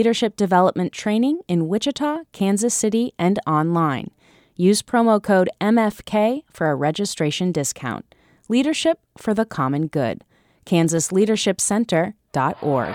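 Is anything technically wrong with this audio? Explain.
Yes. From 8.85 to 12.84 s there are periodic USB or driver dropouts: something blocks the audio path every 0.125 s, skipping a tiny fraction of a millisecond of the speech each time. About thirty evenly spaced ticks result, eight per second, audible only while sound is present.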